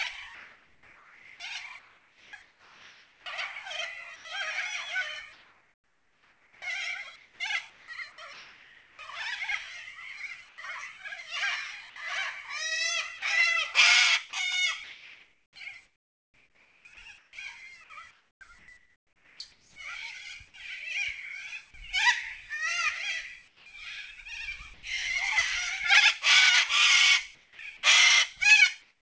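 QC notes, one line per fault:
0.35–8.99 s, 11.90–19.76 s, 27.35–29.17 s: sound chopped by the voice detector. Roughly 5 s of the first stretch, 3.3 s of the second and 0.7 s of the last are swapped for flat synthetic hiss. The quieter edges of the sound drop out. The likely cause is a sender's voice detector repeatedly gating transmission. On a spectrogram, textured regions alternate with smooth, structureless noise bands. The waveform shows abrupt steps into even-level fill.
10.49–10.58 s and 23.48–24.83 s: comfort noise in place of the background. The real ambience, sitting about 30 dB below the loud parts, briefly becomes a steady, featureless hiss, about 5 dB quieter in the first instance. About 0.27 s is replaced within the second range. This is likely discontinuous transmission, with the receiver filling silence with shaped noise. A spectrogram shows a smooth, uniform patch lacking fine detail, still cut off at 8 kHz like the rest of the G.722 call audio.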